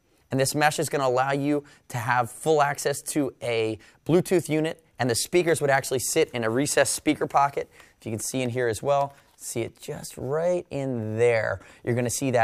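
No technical fault can be heard anywhere in this audio. Nothing breaks, drops out or changes character at any point along the way.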